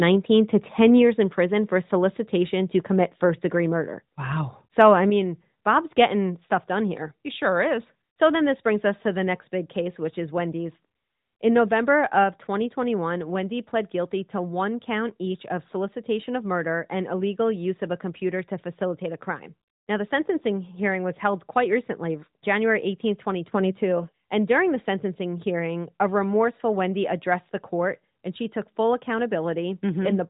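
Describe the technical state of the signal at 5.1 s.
At 5.1 s the speech and background suddenly drop by about 5 dB and stay lower. This is likely a microphone volume stepped down by the call software.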